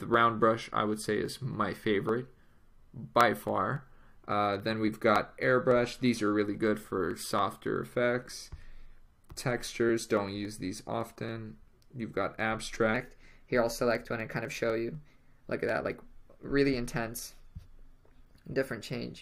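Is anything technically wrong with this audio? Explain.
Yes. From 12.94 s to the end at 19.22 s, a section plays at the wrong speed, about 1.12 times too fast and roughly two semitones higher, likely from playback on a mismatched clock. Unlike a pure pitch shift, tempo and pitch jump together.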